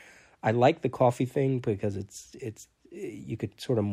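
No technical faults are audible.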